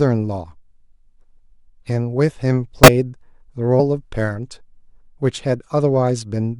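Compressed frames skipped at 2.84–2.88 s and 3.79 s: the decoder lost whole frames, so the speech jumps ahead roughly 70 ms, then 50 ms.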